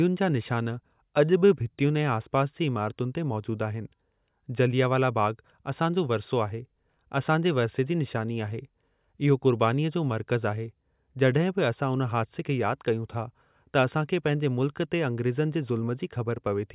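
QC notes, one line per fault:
No faults found.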